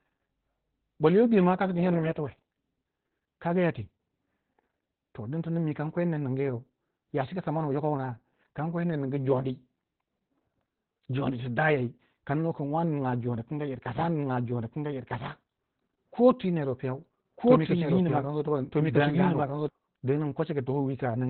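From start to end the speech carries heavy Opus voice compression. The sound is muffled, hoarse and faintly robotic, which fits a narrowband SILK mode at roughly 8 kbps. The linear-prediction coder keeps the vocal-tract shape but codes the excitation coarsely. The band is also cut, with nothing above 4.3 kHz. On a spectrogram the energy stops at a flat ceiling near 4.3 kHz, and the harmonics look smeared in 20 ms blocks.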